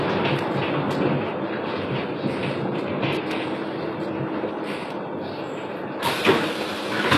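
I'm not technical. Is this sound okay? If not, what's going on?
No. The whole clip has heavy HE-AAC compression damage, likely from very low-bitrate encoding. The top end stops near 12.3 kHz. The treble above the lower range is rebuilt from copies, so it sounds gritty and metallic, not natural.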